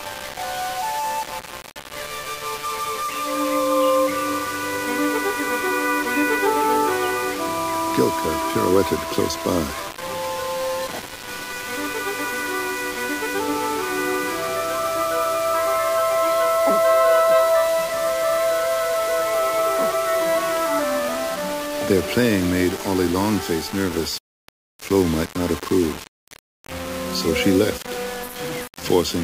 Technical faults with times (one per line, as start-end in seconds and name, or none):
0.00-29.24 low bit depth without dither